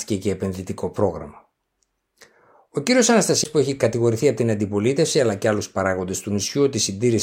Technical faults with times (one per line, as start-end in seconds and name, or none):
3.44 CD skip